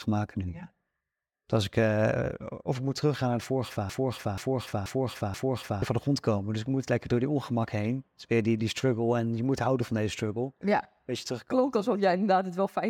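After "teruggaan naar de vorige", from 3.89 to 5.82 s, a broken-record loop repeats one 0.48 s fragment exactly four times, likely from a stalled player resending its buffer. Unlike an echo, the repeats never fade, and the speech is lost before "van de grond komen".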